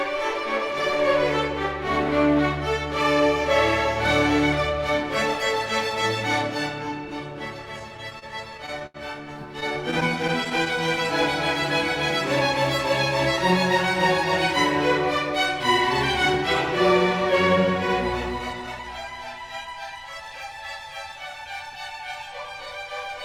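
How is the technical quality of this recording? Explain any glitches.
The recording has two bursts of repeated stalls (stutter), from 7.79 to 8.96 s and from 9.60 to 10.77 s. In each, the sound hitches roughly ten times and drags. The longest hold is 81 ms, in the first burst. About 15% and 11% of those spans is filled. Packets arrived late, so the jitter buffer kept running dry. The receiver stretched the last sound until data resumed, so nothing is lost, only delayed.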